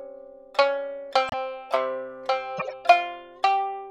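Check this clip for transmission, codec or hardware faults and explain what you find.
Two short bursts of corrupt frame decoded. The first runs from 1.29 to 1.34 s, a brief glitch spanning a couple of frames. The second, from 2.57 to 2.73 s, covers about five frames. Each comes through as a chirp, squeak, blip or burst of noise. In both, flipped bits in the compressed data gave the decoder wrong gains or codes, and it played the frames anyway, scattering energy at the wrong frequencies. The errors peak at roughly -15 dBFS.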